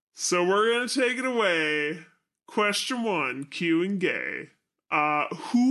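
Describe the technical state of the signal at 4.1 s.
At 4.1 s the speech is affected by a wrong sample rate, a fault that runs through the whole clip. The samples are replayed slower than they were captured, with no rate conversion, so timing and pitch shift together. The result plays at about 0.73 times normal speed and roughly 5.5 semitones low, giving a dragged, deepened voice. This fits 44.1 kHz material played back at 32 kHz.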